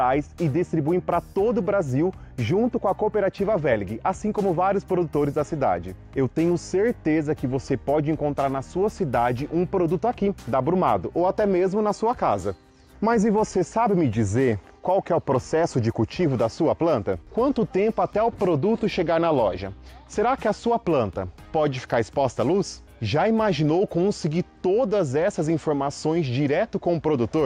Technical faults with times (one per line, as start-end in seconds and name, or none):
none